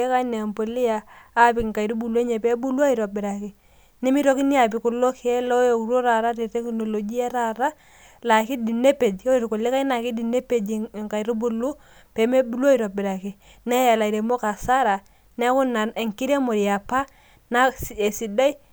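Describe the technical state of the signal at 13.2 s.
At 13.2 s the signal is intact, with no audible fault at that moment.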